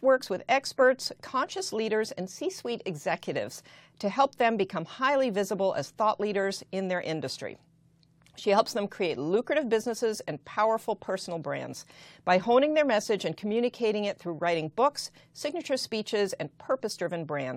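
Nothing in this speech recording stands out as a technical fault; it just runs along without any glitch worth pointing to.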